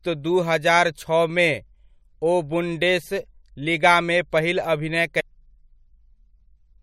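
It's a speech clip with one spot of damaged data in the compressed stream, a brief blip from 5.19 to 5.21 s where the decoder lost sync on corrupted frames.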